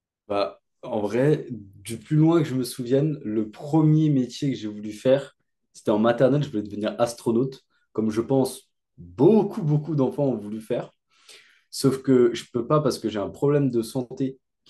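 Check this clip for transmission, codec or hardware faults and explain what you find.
No faults detected.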